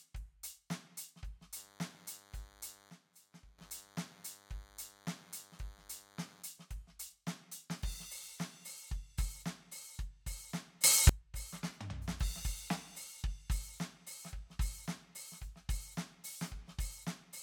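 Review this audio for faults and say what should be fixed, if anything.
From 1.56 to 6.43 s there's a thin DECT cordless phone buzz at 100 Hz, roughly 20 dB under the music, from a nearby handset's radio bursts being rectified in the audio circuit. Keep DECT bases and handsets well away from the gear, and use shielded cabling.

There are two sudden gain jumps. At 2.90 s the music and its background drop by about 16 dB together until 3.58 s. At 10.84 s they leap up by about 24 dB until 11.09 s. The likely cause is a digital gain change applied with no ramp. Make sure gain changes are smoothed over a few milliseconds rather than switched instantly.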